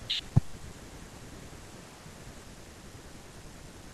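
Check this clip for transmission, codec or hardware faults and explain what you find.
One fault appears in this speech clip. At 2.76 s there is audio missing between chunks: the recorder likely lost about 20 ms while changing processing blocks, and the spliced edges produce a brief skip.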